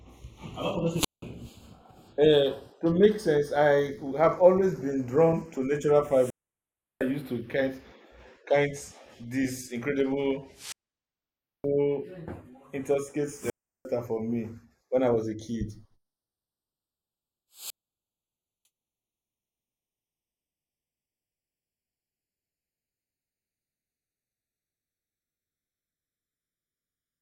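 A speech recording with a slow, sweeping flanging across its full length: this is the channels drifting apart, two devices on separate clocks, a few tens of parts per million apart, so the inter-channel delay creeps to about half a millisecond and comb notches glide when summed. Five times a burst of hiss rises, then near silence before the voice returns: 0.93–1.22 s (179 ms mute), 6.03–7.11 s (707 ms), 10.53–11.67 s (922 ms), 13.31–13.89 s (352 ms) and 17.52–18.66 s (950 ms). Each is a wireless microphone squelch dropout, where the FM signal fades and the receiver mutes.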